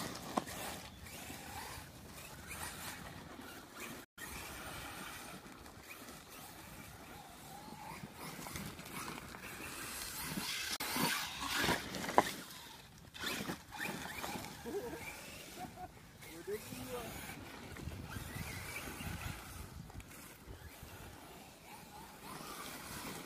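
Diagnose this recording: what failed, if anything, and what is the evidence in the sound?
A digital broadcast dropout at the reception stage cuts the audio twice: from 4.04 to 4.18 s and from 10.76 to 10.81 s. Each time the waveform tapers over about 8 ms to a flat line, then resumes. On a spectrogram these are clean vertical gaps across the whole band. The receiver muted when frames went bad. The 128 ms and 32 ms holes fit whole 32 ms frames discarded, four and then one, so that material is gone.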